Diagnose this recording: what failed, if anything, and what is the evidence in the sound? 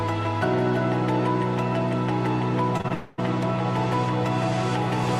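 The failure is in the network stage. Three short concealed packet losses sit close together, at 2.77 to 2.81 s, 2.81 to 2.86 s and 2.88 to 2.92 s. Each gap is 20 ms of audio that arrived too late to decode. The receiver patched each hole by extending the sound just before it. That gives a brief smear or wobble at each spot.

Right after that, from 2.94 to 3.20 s, about 240 ms of audio is missing. The gap is filled throughout, with no silence. What you hear is the preceding sound carried on artificially, which smears into a drawn-out buzz or hiss. The likely cause is a long network dropout. A burst of delayed or lost packets left the receiver to invent the whole stretch. Normal audio resumes at 3.20 s, and the original content of that quarter second is gone.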